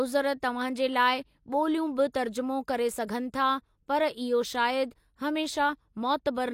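Speech, with one instance of pre-echo at about 2.12 s. Just before a sharp onset there, a hiss of roughly 18 ms rises out of the quiet gap, and the attack itself sounds blunted. The transform codec spread the quantisation noise meant for the loud onset across the whole block, so it leaked backward into the silence. On a spectrogram this shows as a thin broadband smear ahead of the attack's vertical edge; on the waveform, low-level noise precedes the transient.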